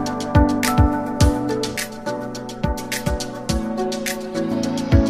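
From 1.77 s to 4.52 s the sound turns hollow and phasey, the signature of channel delay (comb filtering). One channel lags the other by roughly 5 ms, and when the two are summed to mono their shared content cancels at evenly spaced frequencies, starting near 100 Hz and repeating up the spectrum. Unlike a flanger or phaser, these notches stay fixed rather than sweeping, so the hollowness sounds static instead of whooshing.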